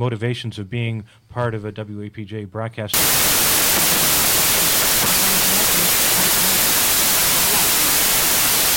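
From 2.94 s to the end, the audio shows a wrong sample width: 16-bit samples read as packed 24-bit, so bytes straddle sample boundaries. Loud broadband noise buries the sound, which plays 1.5 times fast and high. A spectrogram fills with dense hiss.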